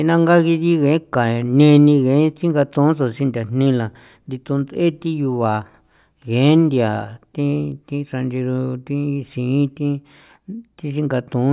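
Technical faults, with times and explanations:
No technical faults can be heard in this speech recording.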